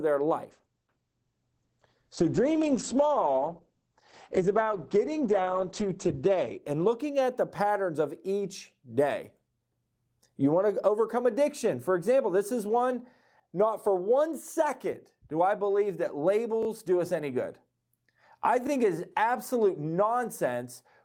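From 0.48 s to 7.41 s, a call bitrate drop muffles the speech. The bandwidth estimate fell, and the encoder went from 32 kbps to 9 kbps. It sits at that lowest rate for about 5.4 s. The audio band shrinks from 20 kHz to 8 kHz, so the top end disappears. Coarser coding adds a rough, watery edge. Clarity returns by "patterns of each".

At 16.63 s, between "do I believe that" and "do us any good", a repeated buffer causes a stutter. New audio came late, so the device replayed its last 23 ms block two extra times. That length fits a 1024-sample buffer. Each repeat joins hard. Nothing seems skipped. At 18.67 s, just before "it is absolute", a 23 ms block plays once more, a shorter hiccup.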